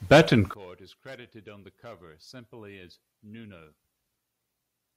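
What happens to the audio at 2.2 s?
At 2.2 s the speech is about 26 dB down, from 0.54 s to the end, likely one channel inverted, cancelling shared centre content when summed.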